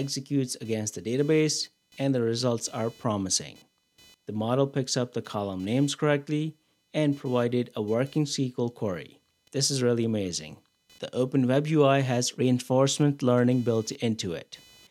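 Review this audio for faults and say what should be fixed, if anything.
Computer activity noise runs through the whole clip: a faint buzzing, chirping texture pulsing at around 500 Hz, roughly 35 dB below the program level. It rises and falls with processor, graphics or mouse load rather than with the audio itself. Those load swings shift the ground shared between the computer and the audio circuit, and that fluctuation rides into the signal path. To prevent it, record through an isolated or external interface, or fit a ground-loop isolator.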